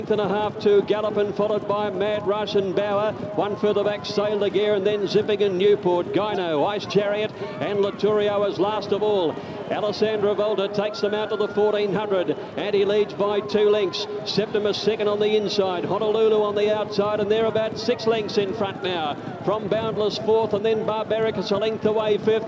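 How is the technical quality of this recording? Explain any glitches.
Nothing here trips me up; there are no glitches to explain, with no dropouts, clicks or other technical faults anywhere in the recording.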